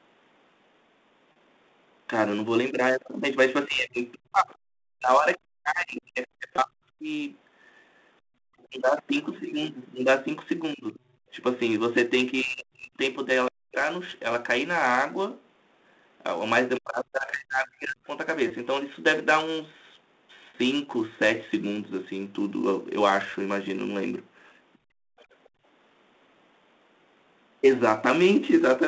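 Speech heard over a telephone-band line (G.711 A-law, energy confined to roughly 200 Hz to 3.7 kHz) carries a constant layer of sample clock jitter. The converter's timing wanders by something like 10 µs, so steep parts of the waveform are sampled at the wrong instant. The result is a roughness sitting around 20 dB under the signal that swells on loud, bright syllables and disappears in pauses. On a spectrogram it shows as a diffuse haze riding directly on the speech energy, densest under sibilants and absent between phrases. Packet loss with pitch repetition occurs four times: 1.32 to 1.36 s and 20.50 to 20.54 s (40 ms each, consistent with two lost 20 ms packets), and 6.56 to 6.58 s and 18.48 to 18.50 s (20 ms each, pointing to a single packet). Each gap is bridged by repeating the last pitch cycle, heard as a brief held, buzzy tone. The waveform shows identical repeated periods, and the spectrogram shows harmonics frozen flat for that instant. 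Speech suppressed in double talk affects 3.67 to 8.8 s, 10.73 to 13.8 s and 16.78 to 18.09 s. The talker dips or vanishes in pieces, by up to about 40 dB, for roughly 3 s, 1 s and 1.5 s in total within those spans. The likely cause is an echo canceller unable to separate near speech from loudspeaker echo while both sides talk. This appears as sudden envelope troughs in the waveform and blank or thinned columns in the spectrogram. The other side's voice leaking through appears as a faint second talker from 4.48 to 6.01 s (about 30 dB down), 11.12 to 11.18 s (about 25 dB down) and 24.73 to 25.49 s (about 35 dB down). It is most likely loudspeaker echo the canceller left in the microphone. On a spectrogram it forms a weak, separate harmonic pattern that does not follow the main talker's pitch. Background gated by the echo canceller follows from 24.78 to 25.64 s. The room tone drops by up to 33 dB for about half a second in total, then returns once the canceller releases. 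In the waveform the noise floor flattens to near silence, and the spectrogram shows a dark notch across the band.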